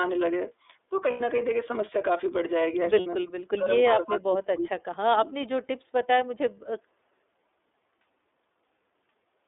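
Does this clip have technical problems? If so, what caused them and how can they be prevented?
Yes. The iLBC codec runs throughout. At 13.33 kbps with 30 ms frames, the speech is confined to roughly 300 Hz to 3.6 kHz and sounds rough and synthetic. To prevent this, negotiate a wideband codec such as Opus when both endpoints support it.

Lost iLBC frames occur at 1.11 to 1.21 s (90 ms) and 2.99 to 3.07 s (60 ms). The decoder repeats the last pitch cycle with added noise, so each gap sounds like a held, buzzy vowel. Reducing packet loss through better network quality of service or jitter buffering would prevent these gaps.

At 3.2 to 3.69 s, 3.87 to 5.35 s and 5.62 to 5.9 s, the speech dips by around 35 dB or cuts out in pieces. This is likely speech suppressed in double talk, where the echo canceller turns down the near talker while the far side is speaking. A headset, or an echo canceller with better double-talk detection, would avoid this.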